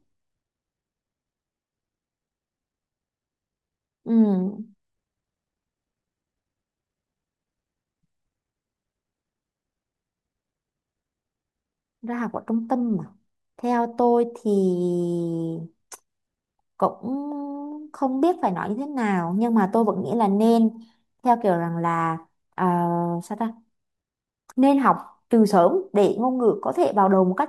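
No technical fault can be heard anywhere in the speech recording; the signal stays continuous and stable throughout.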